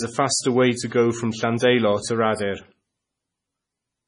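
From start to finish the speech carries heavy damage that sounds like likely MP3 compression at a starved bitrate, which fits roughly 24 kbps. Nothing survives above 10.5 kHz, so sibilants lose their top and turn dull and metallic, while quieter frequency bands drop in and out between frames, giving a watery, swirling texture. On a spectrogram this appears as a flat ceiling at 10.5 kHz with flickering, blocky holes below it.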